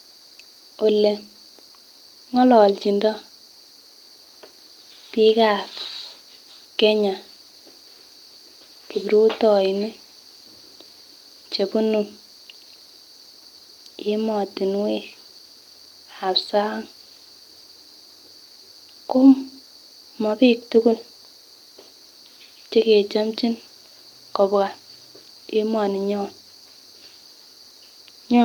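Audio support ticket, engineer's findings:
Listened through the full speech recording and nothing stood out that would point to a fault in the audio path.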